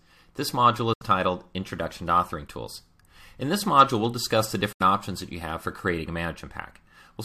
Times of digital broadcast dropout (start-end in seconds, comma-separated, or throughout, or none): 0.93-1.02, 4.72-4.81